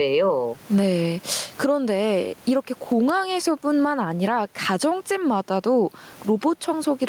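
Gain pumping runs through the whole recording: with the background noise about 37 dB below the speech, the gain is pulled down on each loud syllable, swinging roughly 15 dB. The likely cause is excess input gain forcing a fast limiter to clamp repeatedly. Unlike a noise gate, the noise never cuts out.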